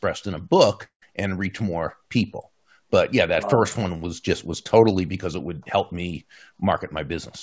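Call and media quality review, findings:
Gap in speech at 0.84 to 1.03 s, between "in a book" and "and reach more people". Likely cause: long network dropout, audio never arriving and receiver concealment stretching the last sound into a fading buzz, then near-silence for about 0.1 s. Waveform: decaying tail, then flat line. Spectrogram: smeared harmonics fading to blank columns. Roughly 0.18 s of speech lost. Band-limit at 8 kHz across the clip fits a G.722 call path.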